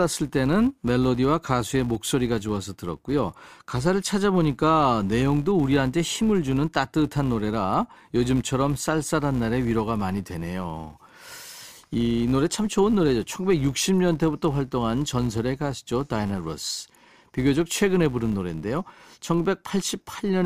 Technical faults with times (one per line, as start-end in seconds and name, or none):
0.00-20.45 filter restarted on every block